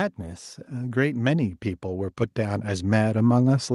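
From 0.17 s to the end of the clip, the automatic gain control judged the incoming level too low and kept raising its gain in a slow, continuous ramp rather than settling. This is automatic gain rising: the speech and the background noise behind it swell upward together, so the background grows along with the talker, and the loudness creeps higher across the remaining seconds instead of holding steady.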